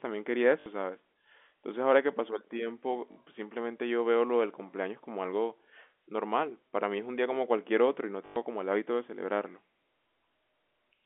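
Speech over a narrowband telephone line, band-limited at about 3.5 kHz and carried with G.711 coding, has brief robotic, buzzing stutters at 0.60–0.66 s, 3.12–3.16 s and 8.26–8.36 s. They come from packet loss with the last packet repeated: audio repeats at a 50 Hz rate, which fits 20 ms packets.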